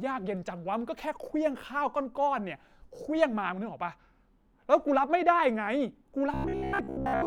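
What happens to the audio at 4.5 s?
Nothing goes wrong at 4.5 s; the speech carries straight through that moment with no dropout, click, distortion or other fault.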